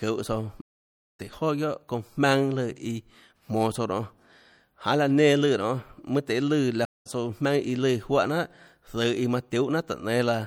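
A low-bitrate encoder, likely MP3 compression at something like 64 kbps, has thinned this speech throughout: the treble is cut off and weak frequency detail flickers between frames, giving a plainly audible watery, swirly quality with metallic chirps on s sounds and smeared onsets. Twice the stream reconnect fault appears, when the connection dropped and a fresh decoder restarted mid-stream. From 0.61 to 1.20 s there is 573 ms of silence, and the speech resumes roughly half a second further on. From 6.85 to 7.07 s a 201 ms gap skips ahead about a fifth of a second.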